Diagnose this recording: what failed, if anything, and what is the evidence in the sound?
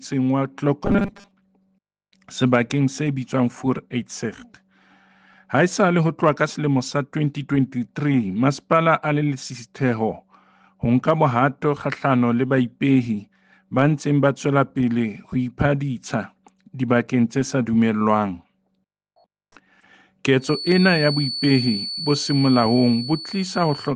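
Between 0.85 and 1.31 s the sound takes on a rigid, metallic buzz pitched at 200 Hz, the robotic sound from repeated short buffers. The likely cause is at the driver or buffer stage: fresh audio arrived too seldom, so the last 5 ms was replayed over and over, which fits a 5 ms buffer, while most of the real audio in that stretch was skipped. On a spectrogram this shows as evenly spaced harmonics of 200 Hz. The waveform shows a short cycle roughly repeating.

From 20.37 s to the end at 23.96 s, a thin, steady tone at 4.4 kHz sits around 10 dB below the sound and swells and fades slowly in level. This is a feedback whistle. The likely cause is an acoustic loop at the playback end, with the loudspeaker reaching the microphone and the loop gain held just short of runaway, so the tone persists without growing. A spectrogram shows it as a narrow horizontal line at 4.4 kHz that stays in place across that span.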